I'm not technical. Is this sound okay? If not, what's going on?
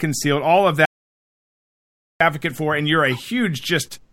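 No. From 0.85 to 2.21 s the speech cuts to total silence, an audio dropout to silence. The input was likely lost briefly, so 1.35 s is missing.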